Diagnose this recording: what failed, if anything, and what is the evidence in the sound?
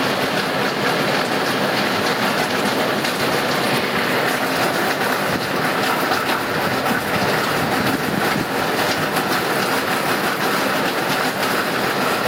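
Gain pumping runs through the whole clip. The gain is pulled down by about 5 dB under each loud sound, so the dynamics are squashed. The likely cause is gain set far too high with a fast limiter in the converter or input stage. On a waveform the noise floor rises and falls with the envelope, and a spectrogram shows matching breathing bands.

Chunks out of order occur from 2.5 to 3.5 s, 5.5 to 7.5 s, and 9.5 to 11.5 s. Each is a jumbled passage, where a 500 ms block plays one or three blocks late. This points to a buffer or storage write fault. The waveform and spectrogram show hard vertical discontinuities at 500 ms boundaries.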